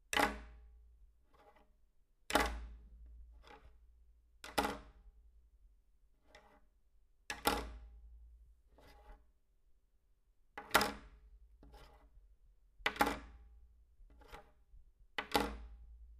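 Nothing stood out on listening to this recording of everyday sounds.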